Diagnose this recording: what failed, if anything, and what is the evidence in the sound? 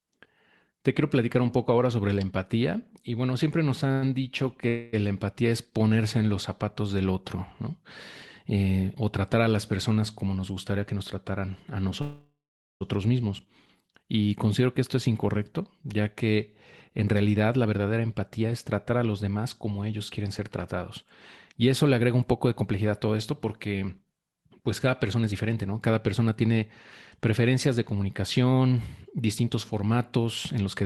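Network stage: a late packet emptied the jitter buffer at 3.87 to 3.92 s, so the receiver stretched the last sound by 22 ms. This short stall from a late packet is heard as a held sound, with nothing lost.

Network stage, likely delayed packets: call audio freezes at 3.92 to 4.04 s, 4.68 to 4.95 s and 12.01 to 12.83 s. Fading buzzes fill the gaps, and the last one goes silent for 470 ms.

Buffer stage: a jitter buffer slow-down at 13.47 to 14.23 s repeated pitch periods, adding 54 ms. The speech drags at 94% speed, with the pitch unchanged.

Buffer stage: a jitter buffer speed-up at 16.90 to 25.57 s cut pitch periods to shed delay, running at 108% and losing roughly 0.7 s in total. It recurs at 30.17 to 30.84 s at 107%, so the speech sounds hurried.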